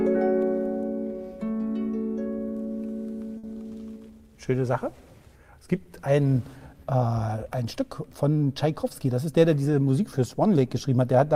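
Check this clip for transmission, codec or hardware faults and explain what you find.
One fault is audible: a burst of packet loss from 3.37 to 3.46 s. There the sound stalls into a held, fading continuation of whatever came just before, then jumps ahead with a small piece skipped. Several consecutive packets never arrived in time, so the receiver stretched the last good audio for about 60 ms while lowering its level, and when playback resumed, about 60 ms of the original had been lost.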